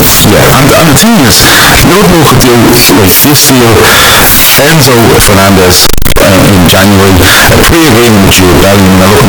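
From start to finish the speech is buried under very loud, harsh distortion, with quiet stretches as loud as everything else. The likely cause is signed and unsigned mixed up in 16-bit samples: the flipped top bit turns each zero crossing into a full-range jump.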